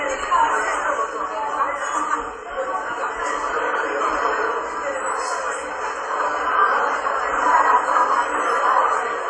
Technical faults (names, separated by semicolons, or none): WMA compression